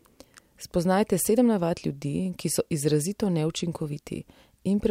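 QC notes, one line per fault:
No audible faults found in this speech recording.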